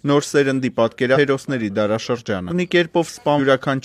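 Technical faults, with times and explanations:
1.12–1.18 s, 2.47–2.52 s and 3.35–3.40 s, compressed frames skipped: at each point the audio jumps forward with no silence, losing roughly 0.4 s, 0.7 s and 0.3 s, amounts that fit whole 46.4 ms codec frames going unplayed. Unlike a dropout, nothing goes quiet; material is simply missing.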